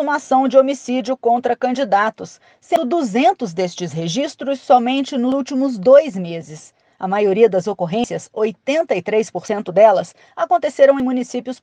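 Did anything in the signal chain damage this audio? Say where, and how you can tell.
Yes. Jumps at 2.76, 5.32, 8.04, 9.48 and 11.0 s, each skipping up to about a tenth of a second with no silence, are likely a dropped buffer (overrun) at the driver stage. The waveform shows abrupt seams, and the spectrogram shows thin vertical lines.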